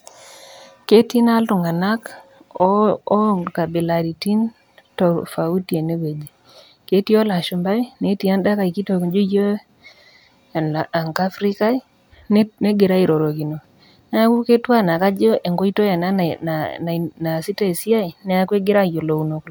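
No technical faults can be heard anywhere in the speech recording; the signal stays intact and continuous throughout.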